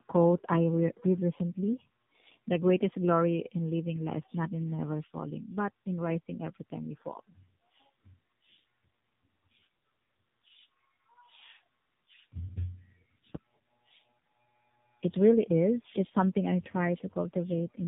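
From start to finish, tandem speech coding roughens and muffles the speech with a warbly edge, consistent with two narrowband AMR coding passes. A spectrogram shows a hard ceiling at 3.8 kHz and smeared harmonics. At 13.35 to 13.42 s, a phantom power thump from a supply switching on or off on a live input adds a deep low-frequency bump that decays in about 16 ms, seen as one large waveform excursion.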